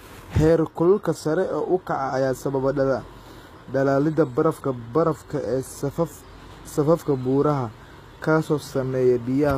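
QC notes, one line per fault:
Throughout: HE-AAC compression, likely. The treble sounds rebuilt rather than real, and s sounds come out gritty and lispy. Above the crossover the harmonics don't line up with the body of the speech, and nothing gets past about 14.9 kHz. That fits a low bitrate around 20 kbps.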